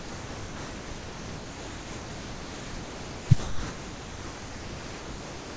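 From 0.00 to 3.29 s and again from 3.40 to 5.56 s, the speech is replaced by steady comfort noise, likely sound dropped by the voice detector. On a spectrogram these spans show flat, featureless noise with no harmonics below the 8 kHz ceiling, and the waveform shows a low, even envelope.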